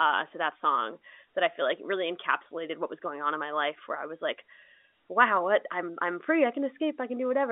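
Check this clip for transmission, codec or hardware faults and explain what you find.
Nothing stood out on listening to this speech, which carries the narrow, roughly 250 Hz to 3.6 kHz band of an ordinary G.711 telephone line.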